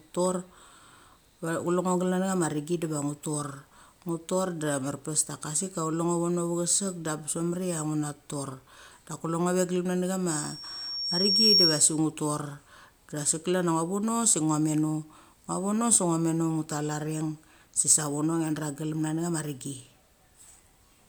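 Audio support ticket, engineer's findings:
Loudspeaker feedback squeal, 10.31–12.00 s. Single tone near 5.5 kHz swells over about a second, ending roughly 10 dB above the speech. Mic picking up its own loudspeaker. Loop gain exceeds unity at that frequency. Tone self-sustains until the loop breaks.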